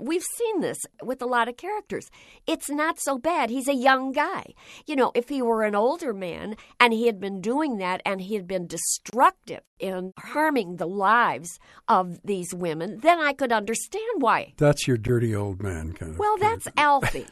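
A speech clip with a gap at a join of encoded pieces: about 31 ms of silence at 9.10–9.13 s after "and he had been", and about 12 ms at 15.07 s before "old man kind of". Unlike a dropout, no audio is lost; the speech resumes where it stopped.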